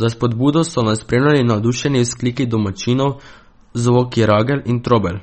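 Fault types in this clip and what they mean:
MP3 compression: treble stops sharply near 8.4 kHz, a flat ceiling on the spectrogram, with flickering gaps below; watery, swirly speech, likely a 32 kbps MP3 encode.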